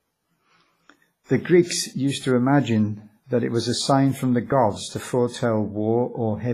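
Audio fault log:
throughout: likely WMA compression, with quantisation noise smeared over long transform blocks making speech ringing and washy, breathing hiss, nothing above 15.5 kHz, fitting roughly 24 kbps.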